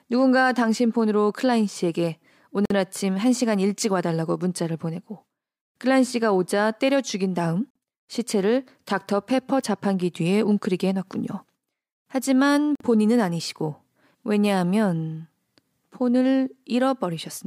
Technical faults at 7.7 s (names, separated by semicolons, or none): gap between chunks